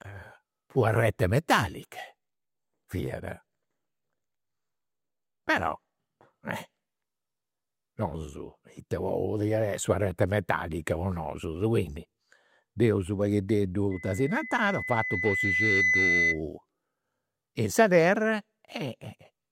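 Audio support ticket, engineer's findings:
Loudspeaker feedback squeal, 13.91 to 16.42 s. Single 2 kHz tone creeps up over about two seconds, ends up a few dB louder than the speech, then cuts. Mic's hearing its own PA or monitor. Loop gain tops one right at 2 kHz, so it runs away. Try pulling the mic back, or notching 2 kHz.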